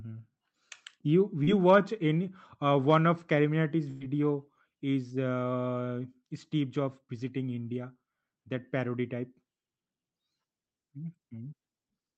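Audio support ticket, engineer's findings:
Short concealed packet loss, 1.43–1.49 s, just before "watch any uh": brief smear. About 40 ms missed the decoder; the receiver extended the preceding sound, then blended back.

Burst of packet loss, 3.91–4.02 s: a held, fading continuation, then a jump ahead. About 100 ms of consecutive packets was lost; concealment stretched and faded the last sound, so that stretch is gone.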